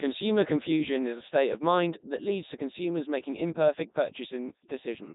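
Throughout, the speech carries heavy Codec 2 vocoder damage. It is rebuilt from sine waves, sounding robotic and buzzy. Nothing sounds above 3.8 kHz, fitting the 3.2 kbit/s mode.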